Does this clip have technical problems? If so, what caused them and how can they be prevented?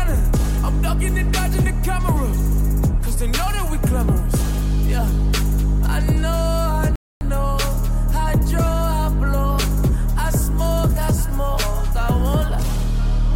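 Yes. At 6.96 s the audio cuts out abruptly in mid-flow and stays silent until 7.21 s, a gap of about 254 ms, before continuing. This is a playback stall: the likely cause is that the player's buffer ran dry or its output thread was blocked, so no samples reached the device until data arrived again. Prevention: enlarge the playback buffer and run audio output on a high-priority thread that never waits on network or disk I/O.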